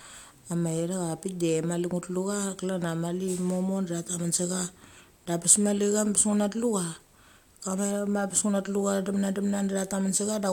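No technical faults can be heard anywhere in the recording. Nothing in the signal calls for comment.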